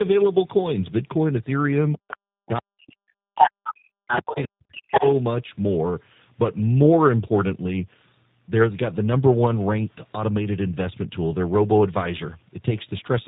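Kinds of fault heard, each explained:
Tandem speech coding: throughout, the speech passed through G.726, then G.711 mu-law, then G.729A, two speech codecs in a row, each re-coding the previous one's damage. The result is rough, muffled and warbly, with nothing above 3.8 kHz.
Speech suppressed in double talk: from 2.27 to 5.04 s, the talker's speech sinks by as much as roughly 40 dB in pieces, about two seconds in all. This is likely an echo canceller turning everything down while both sides spoke at once.
Other side's voice leaking through: short scraps of a second voice appear at 3.39–3.48, 3.64–3.74, 4.07–4.22 and 4.38–4.44 s. The first is about 5 dB louder than the speech, and the others are quieter. This is likely loudspeaker echo the canceller failed to remove.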